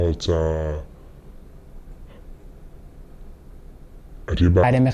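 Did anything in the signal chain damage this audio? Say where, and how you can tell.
Yes. From 0.0 to 4.63 s the speech plays at a wrong sample rate, a fault at the playback stage. It runs at 0.667 times normal speed and sits about 7 semitones low, which fits 48 kHz audio clocked out at 32 kHz without resampling.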